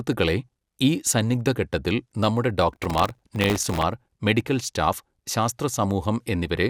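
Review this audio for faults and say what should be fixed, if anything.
Processor overload crackle runs from 2.73 to 3.82 s, after "ഈ സന്നിഗ്ധഘട്ടത്തിൽ നമ്മുടെ": around a hundred very short buffers miss their deadlines, each refilled with old audio, giving gritty tearing. Unlike clipping, it ignores loudness. Use larger buffers or lighten processing load.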